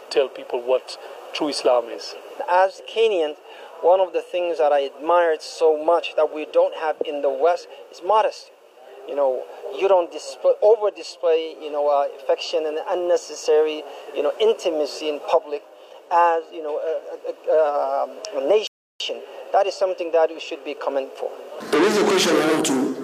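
The player's buffer ran dry at 18.67 s, causing a rebuffering stall: playback halts in silence until more audio arrives, then resumes at 19.00 s exactly where it stopped. No material is lost, but about 0.33 s of dead air is inserted into the audio.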